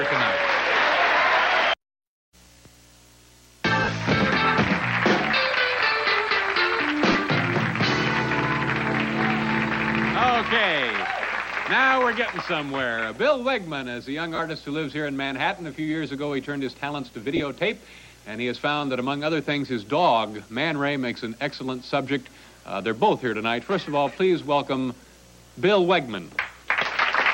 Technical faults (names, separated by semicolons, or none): lost LE Audio frames